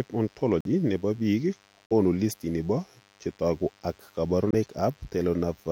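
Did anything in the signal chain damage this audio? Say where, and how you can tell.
Yes. In the analogue wiring, a DECT cordless phone buzz runs under the whole speech clip, a thin, steady drone roughly 35 dB below the voice. A nearby DECT handset or base transmits a burst every 10 ms. The audio circuitry rectifies that radio energy, which gives a 100 Hz fundamental with a dense comb of harmonics. On a spectrogram it appears as evenly spaced horizontal lines, 100 Hz apart, from start to finish.

At the codec stage, a corrupt frame muted fault leaves three abrupt holes. One runs from 0.61 to 0.67 s, just before "nebo biik". One runs from 1.86 to 1.92 s, after "nebo biik" and before "listini bo chetogu ak". One runs from 4.51 to 4.54 s, after "listini bo chetogu ak". The decoder rejected damaged frames and the player substituted silence. The shortest gap, 32 ms, points to one frame of about that length, so the longer gaps look like runs of two or three frames. 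On the waveform each gap is a flat line with square edges, and the timing around it is kept.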